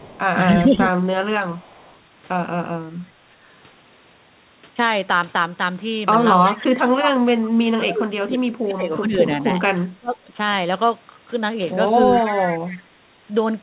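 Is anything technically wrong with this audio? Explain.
Yes. This speech clip has two recurring call-path faults.

Echo leak appears at 0.0 to 0.2 s, 1.58 to 1.98 s, 6.43 to 6.57 s and 12.19 to 12.78 s. A delayed copy of the speech trails the original by 326 ms. It is about 25 dB down at the start, about 35 dB down near 1.6 s, and much stronger, about 15 dB down, at 6.4 s and 12.2 s. This is likely a far-end loudspeaker being picked up by its microphone, with the echo canceller failing to remove all of it.

Speech suppressed in double talk occurs at 0.59 to 0.93 s, 6.48 to 9.22 s and 10.0 to 10.3 s. The speech level dips while the other side is active. The first dip is slight, a few decibels over roughly 200 ms. The later two are deep, about 25 dB, totalling around two seconds in the long stretch and 300 ms at 10 s, so the speech sounds swallowed in pieces. The likely cause is an echo canceller that cannot tell local speech from loudspeaker echo and attenuates both together.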